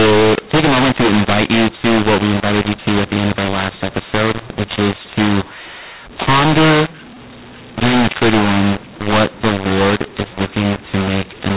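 Throughout the speech runs a mu-law and A-law mix-up: samples coded on the mu-law curve were expanded with the A-law curve, scrambling levels into harsh distortion and filling pauses with hiss. Unlike clipping, even the quietest moments suffer, within the 4 kHz telephone band.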